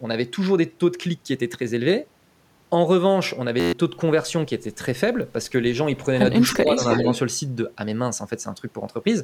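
At 3.60 to 3.73 s a system hang loop replaces the sound with a steady buzz near 86 Hz. While the system froze, the hardware kept replaying one 11.6 ms piece of its buffer, which fits a 512-sample buffer. It repeats about eleven times, and roughly 150 ms of audio is lost. On a spectrogram this shows as evenly spaced harmonic lines. The waveform shows one identical short cycle tiled across the gap.

From 6.51 to 7.19 s there is an echo leak: a delayed copy of the speech trails about 311 ms behind, only around 5 dB quieter. The likely cause is a far-end echo canceller that let loudspeaker sound picked up by its microphone pass back down the line. A spectrogram shows the same patterns repeated, shifted right by that delay.

Inside that stretch, from 6.55 to 6.79 s, the speech is suppressed in double talk. The level dips by about 5 dB, in pieces adding up to roughly 150 ms. This is likely the echo canceller turning down the wanted talker along with the echo while both were active. 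The waveform envelope sags briefly, and the spectrogram shows the energy thinning.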